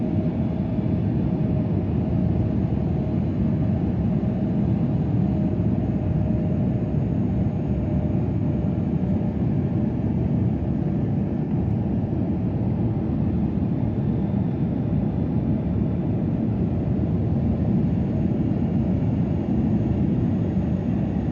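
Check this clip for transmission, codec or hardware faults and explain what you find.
Two short dropouts, both AAC frame loss with concealment, at 8.37 to 8.43 s and 11.44 to 11.50 s. Each gap is about 43 ms, which fits one missing frame, and the decoder patched it from the last good spectrum, leaving a brief smeared, noisy or phasey blip in the sound.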